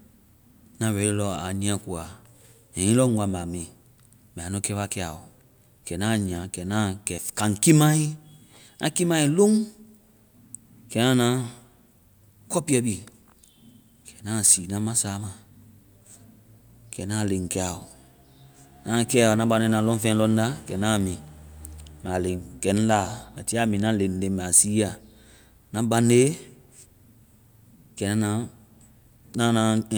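No faults are audible anywhere in this recording.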